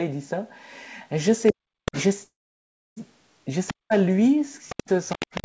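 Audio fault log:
1.47–2.03 s, 3.67–3.73 s and 4.69 s to the end: other side's voice leaking through. A second, fainter voice sits about 15 dB under the main talker. The cause is likely a loudspeaker echo that the echo canceller failed to remove from the microphone.
1.52–1.95 s, 3.70–3.93 s and 4.72 s to the end: speech suppressed in double talk. The talker's speech ducks by around 40 dB while the echoed voice is present. The canceller likely could not separate the two sides, so it turned both down.
2.24–2.98 s: call audio freeze. The sound stalls for about 725 ms, and roughly 650 ms of that is silent. No speech is lost. The audio resumes where it stopped, now 725 ms later. This likely comes from delayed packets emptying the jitter buffer.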